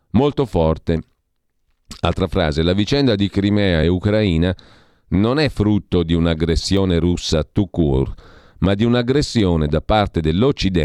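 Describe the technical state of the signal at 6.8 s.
At 6.77 s, just before "russa tout court ma", the speech jumps forward, with about 10 ms of audio gone and no gap. This is likely a dropped buffer (overrun): samples were overwritten before being read, splicing the two sides together.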